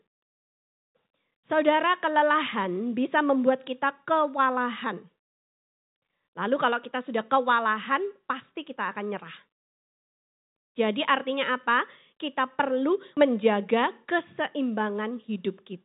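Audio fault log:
Nothing stood out on listening to this speech recording.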